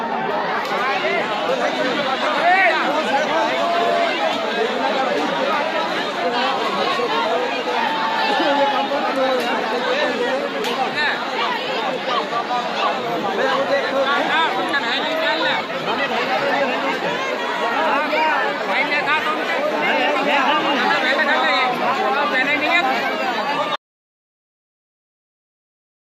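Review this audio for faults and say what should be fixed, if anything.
At 23.76 s the audio drops out to silence and stays dead to the end: an abrupt cut to silence with no room tone, unlike a fade or gate. It is likely a lost input link. Secure cables and monitor input levels during recording so a dropout is caught and retaken.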